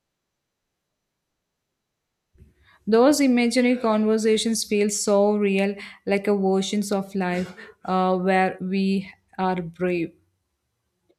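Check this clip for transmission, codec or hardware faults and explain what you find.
Nothing amiss turns up in this speech recording.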